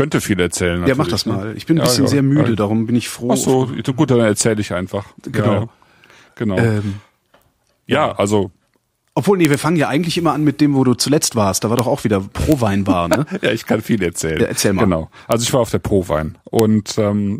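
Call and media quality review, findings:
Integer overflow at 1.86, 4.41, 9.45–9.54, 11.79, 12.52, 13.14, 15.32, 16.59 s. Sharp cracks on loud peaks, harsher than clipping. Gain or mixing stage lacks saturation: peaks barely exceeding the integer limit wrap to opposite sign, flipping across the range.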